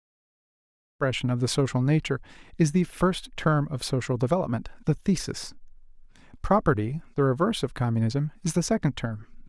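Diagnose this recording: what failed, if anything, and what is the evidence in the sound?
Nothing stood out on listening to this speech recording; the level rises in a smooth fade-in that finishes at about 1.04 s, with no click or hard edge.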